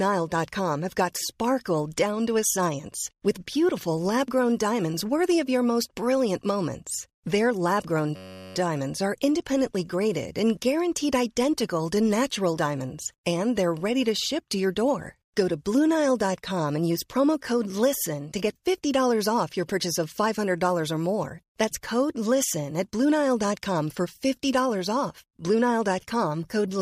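From 8.16 to 8.56 s comes a system hang loop. A freeze cycles one 10.67 ms slice. It buzzes at 93.8 Hz, fitting a 512-sample buffer.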